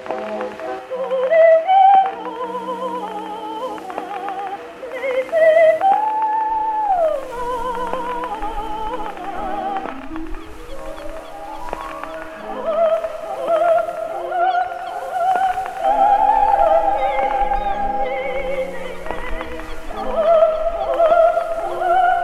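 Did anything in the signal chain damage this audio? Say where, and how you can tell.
No, nothing in the chain from capture to playback left an audible mark on this audio: the signal holds steady level, continuity and timing throughout, with no point where any stage can be heard acting on it.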